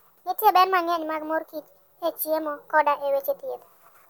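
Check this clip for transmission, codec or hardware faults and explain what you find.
One fault is present, lasting the whole clip. Wrong sample rate: the speech runs 1.5 times fast and about 7 semitones high, which fits 32 kHz audio played at 48 kHz without conversion.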